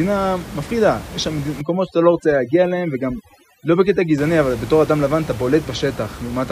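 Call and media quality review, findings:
Overdone noise removal, 1.61–4.18 s: suppressor too aggressive, cutting bands near its noise estimate; room noise (about 15 dB below speech) drops and breaks into twinkling specks.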